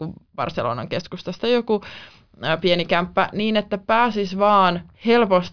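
No technical faults can be heard anywhere in the recording.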